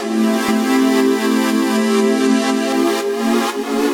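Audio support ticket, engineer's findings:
Doubled audio track, 0.49 to 2.73 s. Second full-band copy of the sound trails the original by around 0.3 s, at roughly equal level. Copy is dry: no decay, no room colour. Starts and stops abruptly. Likely cause: signal captured twice, once via a slower path, or an edit holding two out-of-step copies. Check routing for duplicate sends and the edit timeline.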